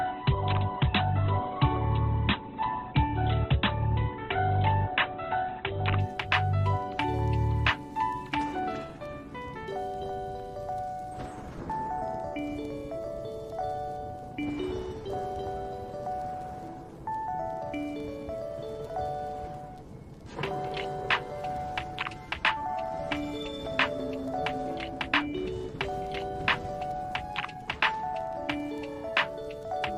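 From the start to 6.0 s the adaptive stream is starting at a low bitrate: nothing sounds above about 4.2 kHz, codec artefacts are stronger, and the sound points to roughly 12 kbit/s Opus. At 6.0 s the player steps up to a better version, consistent with 64 kbit/s, with no gap.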